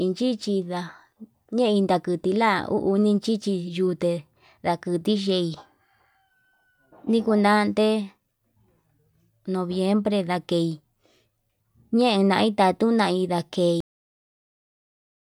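At 13.80 s the final stretch of buffers was never written out, a cut-off end: the recording stops partway through the speech and falls straight to digital silence with no natural decay, staying dead until the clip finishes at 15.40 s.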